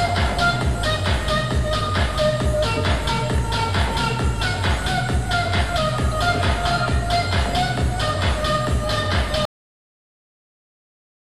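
The audio has a cut-off end: at 9.45 s it stops mid-sound and drops straight to digital silence with no decay, as if the final buffers never got written out.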